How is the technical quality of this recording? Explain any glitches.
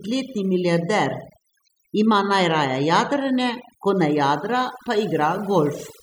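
The technical quality is poor because of overdone noise removal, which affects the whole speech clip from start to finish. A noise reduction process set far too aggressively pushes individual frequency bands down to nothing whenever their level sits near its noise estimate, and the quieter parts of the voice get removed along with the noise. The background becomes an unnatural near-silence scattered with twinkling, chirpy specks. On a spectrogram the gaps between words look almost black, dotted with isolated bright blips, and the voice's harmonics appear ragged and holed at their edges.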